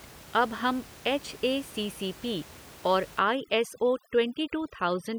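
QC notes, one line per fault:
3.19–5.19 s, overdone noise removal: The background, which sat about 21 dB below the speech, drops and breaks up into twinkling specks. Noise reduction set too strong is shutting off frequency bands near its noise estimate, taking quiet speech detail with them.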